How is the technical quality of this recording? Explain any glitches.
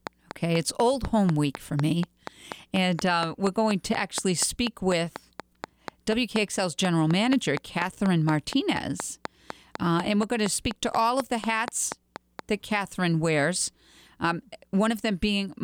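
The recording is marred by one persistent fault. From 0.07 s to 12.4 s a train of clicks runs over the speech, about 50 evenly spaced pulses at 4.1 per second, likely from electrical interference or a faulty connection or power supply. Each sharp tick peaks well above the speech level and stays audible through pauses.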